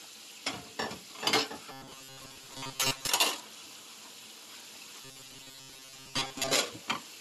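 From 1.72 to 3.07 s, and again from 5.02 to 6.55 s, the sound picks up a rigid metallic buzz pinned at 134 Hz. That's robotic sound from repeated short buffers, likely from a chunk of about 7.5 ms being replayed for most of each stretch while the fresh audio gets skipped.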